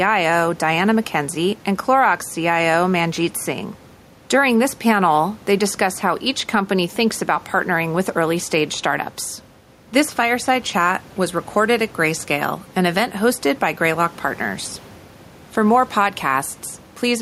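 Speech with gain pumping all the way through, a gain swing of around 5 dB, with the room noise sitting about 29 dB below the voice. That's likely a fast limiter or compressor clamping down on input gain set far too high.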